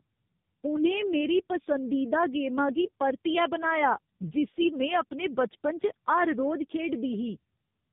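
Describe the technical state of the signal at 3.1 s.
At 3.1 s, like everywhere in the clip, you're hearing tandem speech coding: two low-rate speech codecs in a row, likely G.729A then AMR-NB, each re-coding the other's damage, so it's rough, warbly and muffled, with nothing above 3.7 kHz.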